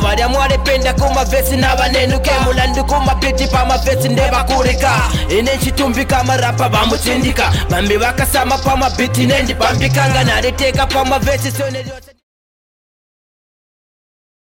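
Nothing stood out on listening, and the level simply eases down from around 11 s to silence by 12.24 s in a smooth, deliberate fade-out.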